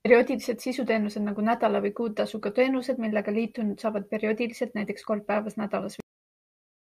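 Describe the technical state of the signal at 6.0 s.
At 6.00 s the speech hits a cut-off end: the final buffers were never written, so the sound stops mid-utterance and drops straight to digital silence until 6.94 s. On the waveform it is an abrupt flatline; on a spectrogram, a sharp vertical edge into blank.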